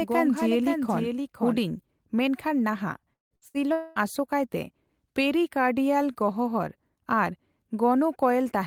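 From the start until 1.6 s, a doubled audio track: a full-band copy about 5 dB quieter trails roughly half a second behind, likely from an edit holding two offset copies. At 3.13 s a long network dropout, likely a stalled stream, begins; the last sound is extended as a fading buzz that gives way to silence, and about 180 ms is lost before sound returns at 3.34 s. Two bursts of packet loss follow, at 3.37 to 3.45 s and 3.48 to 3.57 s, each dropping about 60 ms, which is bridged by a brief, decaying continuation of the previous sound. A second long network dropout from 3.72 to 3.99 s, also likely a stall, removes about 240 ms, filled by a held, fading tail without reaching full silence.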